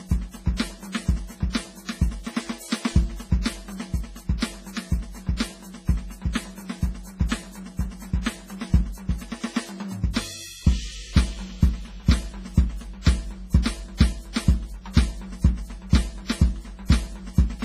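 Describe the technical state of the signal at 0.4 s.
At 0.4 s the music sounds washy and ringing, with a hiss that swells and fades with the signal and nothing at all above 15.3 kHz. This is heavy WMA compression, present from start to finish, likely from an early WMA encoder at a rate near 24 kbps. Its long transform blocks smear quantisation noise across tens of milliseconds, while weaker spectral lines are dropped entirely, thinning the texture.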